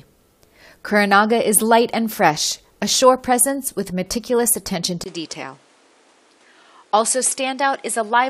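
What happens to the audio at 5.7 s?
By 5.7 s you're inside a stretch that starts at 5.04 s, just after "presence with meticulous attention", and runs to the end. It sounds like an input switched to a poorer device, most likely a swap to a lesser mic or headset path. There's a brief gap of about 20 ms at the switch. After it, nothing comes through above 11.4 kHz, so the top end sounds duller. The level drops by roughly 5 dB, and a new noise floor sits about 30 dB under the signal.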